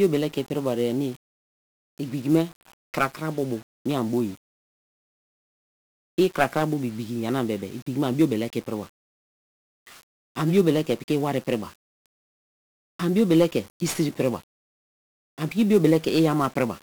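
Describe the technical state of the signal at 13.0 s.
At 13.0 s the speech carries heavy 1-bit DFPWM compression, present across the whole clip rather than at this moment alone. Each sample is reduced to a single up-or-down step on an adaptive level, so broadband quantisation noise makes the sound fuzzy and crackly, with the treble buried in hiss.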